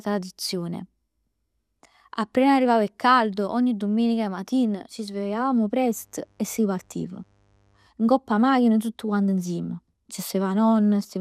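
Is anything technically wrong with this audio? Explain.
Yes. Mains buzz runs from 5.83 to 7.87 s, just after "domenica matina ci svegliavamo": sharp switching spikes twice per 50 Hz cycle leak into the signal, stacking harmonics into the kilohertz range. It sits roughly 40 dB under the speech, a faint, steady, raspy buzz.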